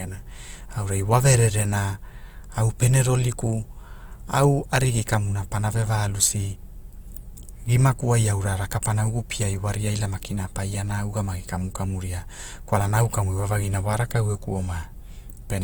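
Opus compression is plainly audible throughout the speech. Tones turn grainy and rough, likely from noise-filled bands at a rate near 24 kbps, despite full 20.2 kHz bandwidth.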